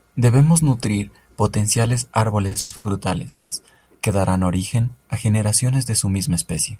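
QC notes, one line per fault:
2.47–2.86 s, repeated stalls (stutter): sound catches four times, longest hold 110 ms, as late packets empty the jitter buffer and the last sound is stretched.
3.28–3.53 s, call audio freeze: sound hangs as a continued buzz for 230 ms, nothing lost, likely packets held up in transit draining the jitter buffer.
4.76–5.28 s, jitter buffer slow-down: sound drags to 91 % speed at unchanged pitch, 57 ms added by repeating pitch periods to rebuild the buffer.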